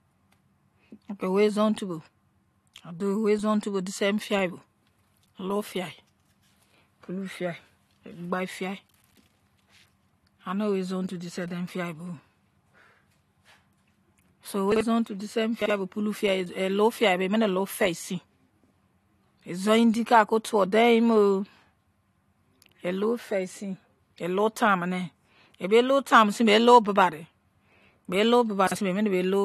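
Chunks out of order at 14.72 s, 15.62 s just before "bo pulu fiyai", and 28.67 s just after "bei lou": one 43 ms chunk plays one chunk late, causing a brief jumbled stutter.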